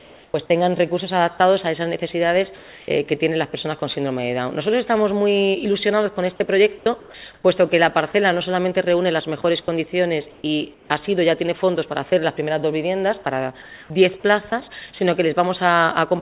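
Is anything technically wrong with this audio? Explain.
Yes. The audio shows repeated voice-detector gating, and the receiving end fills the gaps with synthetic noise.

Sound chopped by the voice detector, from 0.00 to 3.82 s and from 9.42 to 12.12 s: the sending side's voice detector likely switched between transmitting and pausing several times within each stretch. It replaced about 700 ms of the first stretch and 340 ms of the second with comfort noise. The sound breaks up into fragments.

Comfort noise in place of the background, from 6.78 to 7.44 s and from 13.62 to 14.52 s: here the sender likely judged the moment to be silence and stopped sending, apart from occasional noise-level updates. The receiver then played locally generated noise for roughly 320 ms and 300 ms. During these spans the genuine background gives way to an even, detail-less hiss.

Sound dropped by the voice detector, at 14.50 to 14.52 s: at the tail of that second comfort-noise span, the detector likely classed a bit of sound as background. 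About 10 ms of real sound went missing under a 20 ms patch of steady noise before transmission resumed. It registers as a tiny gap.

The audio carries no content above 4 kHz, which fits narrowband G.711 mu-law coding at 64 kbps.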